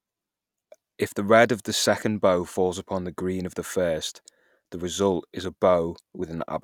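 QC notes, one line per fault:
0.32–5.31 s, clock drift buffer slips: short clicks recur about every 1.66 s in the speech, each a few dozen samples dropped or repeated, likely from two clocks disagreeing by several hundred ppm. The strict regular spacing separates this from random dropouts or crackle.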